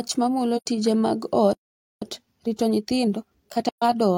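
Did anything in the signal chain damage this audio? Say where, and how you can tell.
Yes. AAC frame loss with muting at 0.57–0.66 s, just before "tije mag", and at 3.69–3.83 s: soft-edged codec holes of about 85 and 128 ms, fitting two and three zeroed frames.

Playback stall from 1.53 to 2.02 s, right after "mamulo tije mag": the speech halts for about 480 ms, likely from the player's buffer running dry or its thread being blocked.

Time-compressed catch-up from 2.02 to 3.94 s: the player trims its backlog by cutting out and cross-fading small pieces, running speech at 1.25x speed with unchanged pitch.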